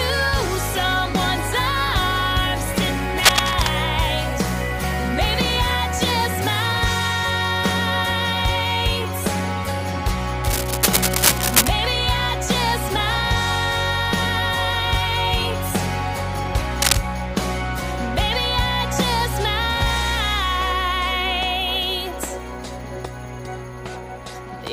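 At 3.20 to 3.71 s, 10.44 to 11.69 s and 16.82 to 16.97 s, bursts of cable scratch noise rasp and rustle over the sound, the first two at about the signal's own level, the last somewhat louder. The likely cause is a worn cable, connector or control being moved, its contact resistance jumping erratically. A spectrogram shows ragged broadband smears at those times, and the waveform shows dense, irregular spikes riding on the signal.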